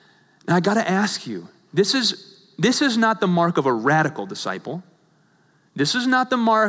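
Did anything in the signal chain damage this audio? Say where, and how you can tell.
No, nothing in this speech recording stood out as damage from any stage of the signal chain on listening.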